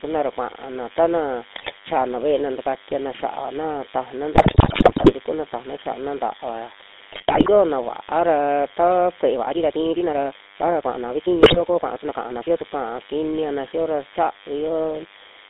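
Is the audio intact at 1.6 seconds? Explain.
No. GSM bit errors hit from 1.56 to 1.73 s, between "kuna ra kua'ana tana" and "xa'ana ve'ena takatiana xia'ana". Corrupted decoder parameters distort several frames into squawks, pops and gargling.

A DECT cordless phone buzz runs underneath. Radio bursts every 10 ms are rectified into a thin 100 Hz buzz with harmonics, roughly 20 dB below the speech.

The GSM full-rate codec colours the whole passage too. Its pulse-driven vocal-tract model gives a gravelly, buzzy roughness. The band runs only from 250 Hz to 3.7 kHz, which fits the 13 kbps full-rate codec.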